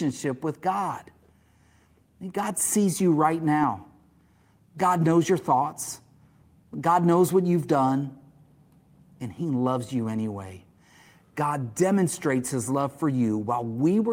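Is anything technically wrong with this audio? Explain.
No, nothing technically wrong can be heard here.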